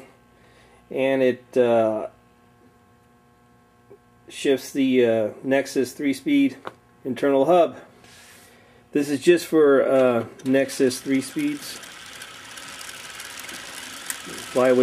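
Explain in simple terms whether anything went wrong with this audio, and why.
Nothing went wrong with this audio, as there is no fault anywhere in it.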